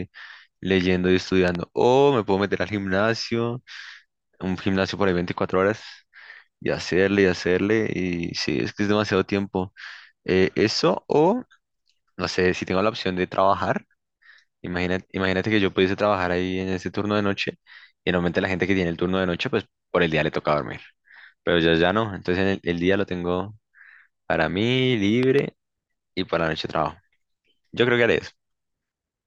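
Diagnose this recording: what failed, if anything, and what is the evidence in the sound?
Two sharp double pops sit on top of the speech, the first between 1.48 and 1.57 s, peaking about 10 dB above the signal, and the second between 25.23 and 25.41 s, peaking about 15 dB above it. In each, the speech carries on unbroken underneath. This is the loud pop fault, likely from the analogue wiring stage: a plug, switch contact or static discharge injects a brief voltage pulse, which the following circuitry shapes into a thump.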